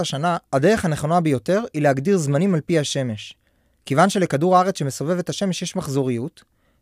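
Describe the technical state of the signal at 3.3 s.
At 3.3 s the speech signal is intact, with no fault present at that moment.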